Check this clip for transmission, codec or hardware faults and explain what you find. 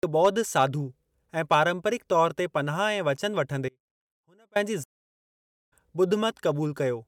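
Two faults stand out in this speech clip, both brief interruptions in the middle of the audio.

Audio dropout to a faint residue, 3.69 to 4.56 s: the speech cuts out abruptly for about 0.87 s, leaving only a faint trace about 35 dB down, likely a live path that lost its signal.

Stream reconnect, 4.84 to 5.73 s: the connection broke and the player restarted its decoder, so after 0.85 s of silence the speech resumes roughly a second further on.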